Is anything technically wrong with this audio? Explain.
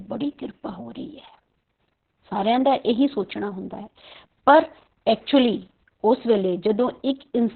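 Yes, there's Opus voice compression throughout: everything above 4.3 kHz is gone and the speech sounds muffled, hoarse and a bit robotic, which fits narrowband SILK at roughly 6 kbps.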